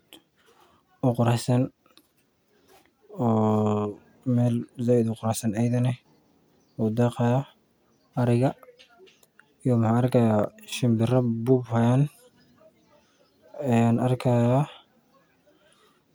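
No technical faults can be heard anywhere in the speech recording.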